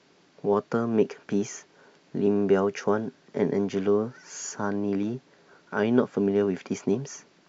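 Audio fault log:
Nothing stood out on listening to this speech recording.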